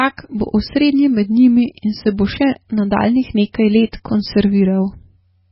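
Throughout the speech, the sound is dull and watery, with nothing above 5.6 kHz, swirling, metallic s sounds and smeared onsets. This is likely heavy MP3 compression, which fits a very low bitrate around 16 kbps, cutting treble and switching weak frequency lines on and off.

At 3.92 s, a short hiss of about 12 ms comes just before a sharp onset, which sounds softened. This is pre-echo: the codec spread noise meant for the loud attack across its whole block, filling the quiet moment before it.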